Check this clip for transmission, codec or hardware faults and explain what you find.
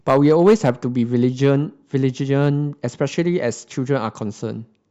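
Hard clipping is present, in three bursts. From 0.08 to 0.70 s the speech turns harshly fuzzy, with milder crackle at 1.24 to 1.51 s and 2.41 to 2.47 s: peaks overdriven by about 6, 2 and 1 dB are flattened, adding high harmonics.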